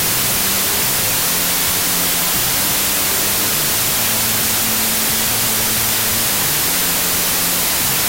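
From start to finish the audio shows a wrong sample width: the bytes appear grouped wrongly, which fits packed 24-bit data read as 32-bit samples. Most values mix bytes from neighbouring samples, so loud noise dominates, with the original faintly audible and running about 1.33 times fast and high in pitch.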